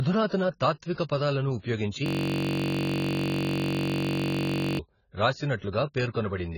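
From start to finish the speech is dull and smeared, with nothing above 7 kHz and a fizzy warble, the heavy damage of likely AAC compression at a low bitrate, not simple low-pass filtering. From 2.06 to 4.79 s a system hang loop repeats one 21.33 ms slice exactly at 46.9 Hz, which fits a 1,024-sample buffer. It sounds like a steady buzz, unlike a dropout's silence.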